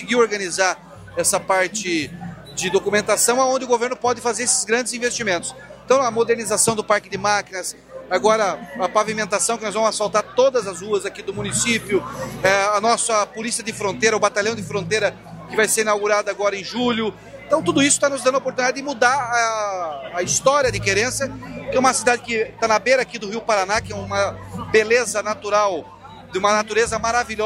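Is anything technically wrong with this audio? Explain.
No, nothing is technically wrong.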